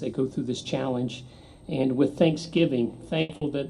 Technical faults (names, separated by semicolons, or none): short concealed packet loss; burst of packet loss